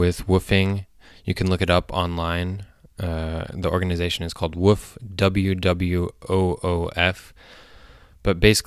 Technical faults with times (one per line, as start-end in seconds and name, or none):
none